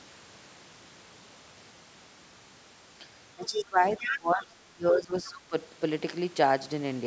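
Speech suppressed in double talk runs from 3.35 to 5.54 s of this speech recording. The talker's level sinks in uneven dips over about two seconds of that span, at the deepest by about 20 dB, while a second voice is present. The likely cause is an echo canceller that could not tell the near talker apart from loudspeaker echo once both sides spoke at once, so it attenuated everything. Other side's voice leaking through appears as brief scraps at 3.45–3.61, 3.99–4.19, 4.39–4.44 and 5.24–5.29 s. Most sit about 25 dB under the talker, but the 3.99–4.19 s fragment comes within about 5 dB. This likely comes from far-end audio played on the talker's loudspeaker reaching the microphone, with the canceller removing only part of it. The call's microphone path carries nothing above 8 kHz.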